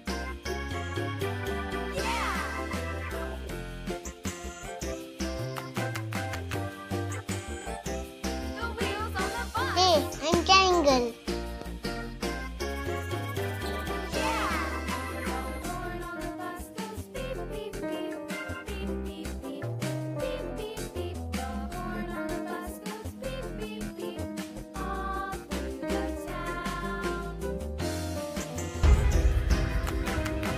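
At 7.62 to 7.66 s there is a brief episode of chunks out of order: a 20 ms block of audio was delivered one chunk late, so it plays after the block that should have followed it. No material is missing, but the two swapped blocks create three abrupt joins, heard as a tiny jumbled stutter. On a waveform, the joins appear as sudden discontinuities; a spectrogram shows thin vertical broadband lines at each seam.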